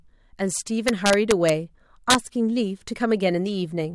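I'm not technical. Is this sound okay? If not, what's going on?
No. Integer overflow at 0.88–1.49 s and 2.10–2.15 s: the loudest speech peaks exceeded the largest storable number and wrapped to the opposite extreme, causing sharp, violent cracks.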